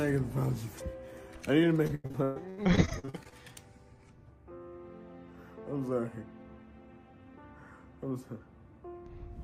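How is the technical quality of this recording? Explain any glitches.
The recording has one clear glitch: a burst of repeated packet loss producing a robotic sound between 1.87 and 3.34 s. Over that stretch of roughly a second and a half, audio packets kept going missing or arriving too late. The receiver patched each hole by extending the last sound it had, but the next hole came almost immediately. About 40 percent of the stretch is synthetic fill, with single gaps up to 122 ms. The result is choppy, stuttering sound with pieces dropped out.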